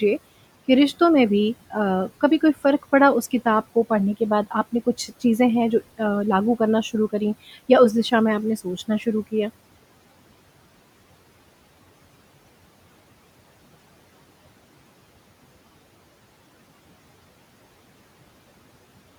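Between 4.72 and 5.23 s, the speech is cut by the noise suppressor. It misjudges a soft stretch of speech as noise and pulls it down by about 10 dB, so roughly a tenth of a second sounds swallowed and faint. Unlike a dropout, the sound never falls to silence. The quieter parts fade with the low room noise, which sits about 22 dB below the speech.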